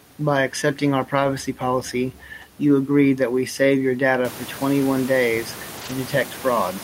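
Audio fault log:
1.15–1.25 s, 2.41–2.43 s, 5.77–5.91 s: lost packet rebuilt from error correction. Lost audio was replaced by low-bitrate redundant copies, so there is no gap, but those stretches sound rougher and noisier.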